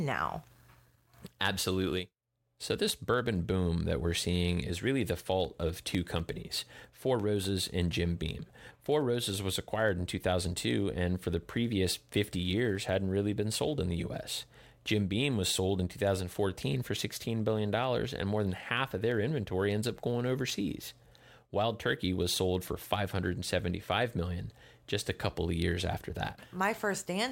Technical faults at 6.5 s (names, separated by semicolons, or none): periodic USB or driver dropouts